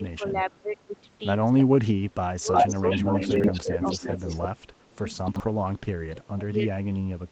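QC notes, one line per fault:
0.0–0.88 s, 1.75–4.14 s and 5.09 s to the end, speech suppressed in double talk: the speech dips and breaks into pieces, mildly at first, then by as much as about 30 dB, and about 25 dB in the last stretch. The likely cause is an echo canceller ducking this talker while the far side also spoke.
2.52–4.94 s, echo leak: a second copy of the speech trails about 307 ms behind and is roughly as loud as the original. Loudspeaker echo probably got past the far end's echo canceller and returned down the line.
3.36–3.44 s and 5.28–5.4 s, chunks out of order: brief garbled, jumbled moments. A 40 ms piece of audio plays after material that should follow it, which fits one chunk arriving a step late, then one arriving two steps late.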